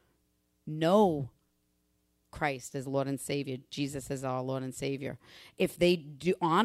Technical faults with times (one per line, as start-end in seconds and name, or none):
none